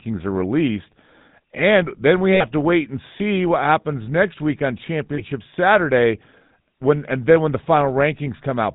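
From the first second to the end, the speech carries the buzzy, gravelly roughness of the GSM full-rate codec, plainly audible and consistent with its 13 kbps mode. The codec rebuilds the voice from a vocal-tract model excited by sparse, regularly spaced pulses, so fine detail between harmonics turns to grit. On a spectrogram, energy stops sharply at 4 kHz, leaving an empty band above, and the harmonics look smeared and noisy rather than clean.

At 2.34 s, right after "then we", the first lost GSM frames appear, running 60 ms to 2.44 s before "to wait and see" resumes. The decoder repeated the last good frame's settings, so the sound hangs as a short metallic ring, which fits about three missing frames. The second loss comes at 5.14 s, after "happens next week on", and lasts 40 ms to 5.22 s. On a spectrogram, each gap shows frozen, horizontally stretched bands, and the waveform shows a repetitive stretch.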